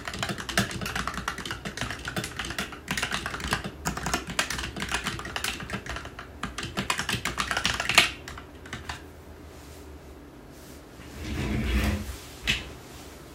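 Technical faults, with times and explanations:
Nothing stood out as a technical problem on listening to these sounds.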